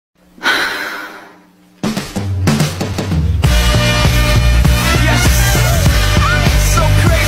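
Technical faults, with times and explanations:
0.66–2.44 s, channel delay (comb filtering): for this stretch one channel lags the other by something like 10 ms, and when the two fold down to mono the shared content cancels at a regular series of frequencies, starting around 50 Hz and repeating roughly every 100 Hz above that. That dense row of fixed notches carves holes all through the spectrum, so the sound turns hollow and phasey, like it's coming down a tube, then snaps back to full body once the offset goes away.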